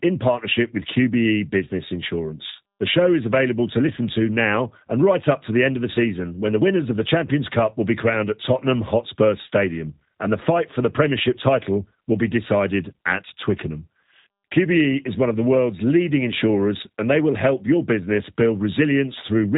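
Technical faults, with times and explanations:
Throughout, G.729 codec: the speech is cut off above 3.8 kHz and has a plainly audible rough, synthetic grain. Each 10 ms frame is resynthesised from a spectral envelope filter, pitch prediction and sparse pulses, consistent with an 8 kbit/s G.729A stream.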